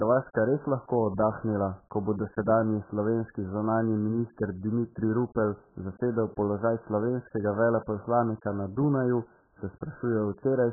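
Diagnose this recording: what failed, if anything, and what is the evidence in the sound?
The failure sits at the codec stage and affects the whole clip. The speech has no content above 1.8 kHz, so sibilants and consonant detail are gone and the voice sounds dull and boxy. Heavy smearing and a watery, warbling texture run through sustained sounds. This is likely AAC compression, AAC-LC at a very low rate, around 8 kbps. The encoder drops the upper bands entirely and quantises the remaining frequency lines too coarsely to hold them steady.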